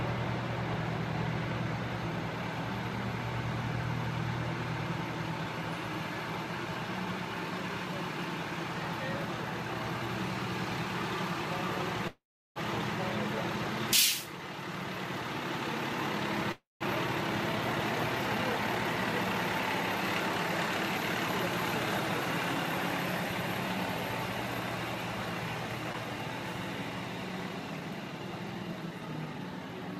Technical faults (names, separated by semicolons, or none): call audio freeze; skip ahead; jitter buffer speed-up